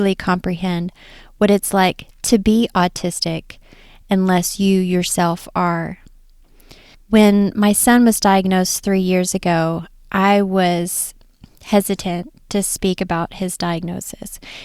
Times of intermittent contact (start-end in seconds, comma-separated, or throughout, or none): none